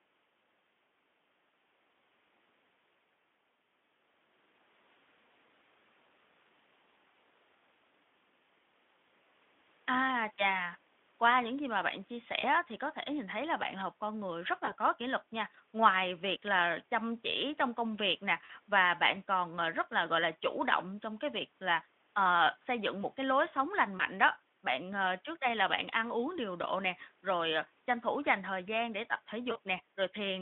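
VoIP packet loss concealed by the speech codec occurs at 12.41 to 12.47 s, 14.65 to 14.73 s, 18.45 to 18.50 s, 23.97 to 24.04 s and 29.51 to 29.58 s. About 20 ms of audio is lost at the first, second and fourth points, which fits a single frame, and about 40 ms at the third and fifth, which fits two. The decoder fills each gap by extending the last pitch and filter shape at falling gain, so the speech briefly turns into a buzzy or noisy, fading smear. Because each frame builds on the one before, the speech stays weak or distorted just after each gap.

Dropped samples occur at 20.25 s, heard as one sharp, very short click. The waveform jumps abruptly, most likely because a single sample or so is missing, far too little to remove any sound. The narrowband Speex path carries the speech around these events.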